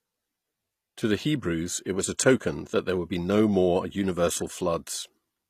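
Throughout the speech there is plainly audible codec damage, and the likely cause is HE-AAC compression at a rate that fits about 24 kbps. The coder transmits only the lower spectrum and synthesises the treble by spectral band replication, copying lower bands upward under a coarse envelope. Above the crossover the harmonics no longer line up with the original, giving s sounds a gritty, metallic or lispy edge. Nothing is present above 14.9 kHz.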